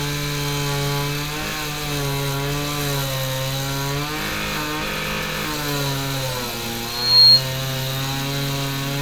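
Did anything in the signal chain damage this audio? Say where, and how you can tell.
Yes. Loudspeaker feedback squeal appears from 6.87 to 7.44 s, at the acoustic and analogue stage where a loudspeaker sits within reach of the microphone that feeds it. A single tone at 4.3 kHz swells over roughly a third of a second and settles well above the rest of the sound. At that frequency the loop gain through microphone, amplifier and loudspeaker passed one, so the tone reinforced itself on every pass until the amplifier limited it or the loop was broken.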